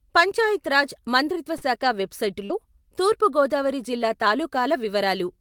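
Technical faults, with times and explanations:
1.57–1.63 s and 2.45–2.52 s, short concealed packet loss: about 40 ms of speech never arrived, so the decoder extended the preceding sound and blended back. It is heard as a brief smear just before "తూర్పు గోదావరి జిల్లా". On a spectrogram the preceding sound runs smoothly on, with little detail.
1.61–1.63 s and 2.50–2.52 s, lost packet rebuilt from error correction: the last 20 ms of each loss was rebuilt from a low-bitrate copy carried in the next packet, after "పంచాయత్ రాజ్ మంత్రిత్వ" and before "తూర్పు గోదావరి జిల్లా". It sounds rougher and noisier, and a spectrogram shows a blurred, grainier slice.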